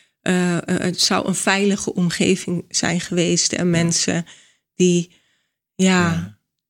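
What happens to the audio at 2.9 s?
Nothing goes wrong at 2.9 s: the speech runs through that moment intact, with no dropout, click or other fault.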